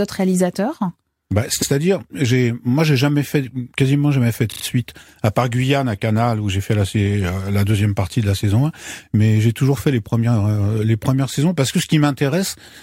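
At 1.61 s, just after "autres réalisateurs bah", a 93 ms stretch of repeated frames plays twice in a row, adding about 93 ms to the speech. At 4.51 s, after "quasiment jamais fait de" and before "suite à part", a shorter 38 ms block loops three extra times, adding 113 ms and producing a rapid stutter.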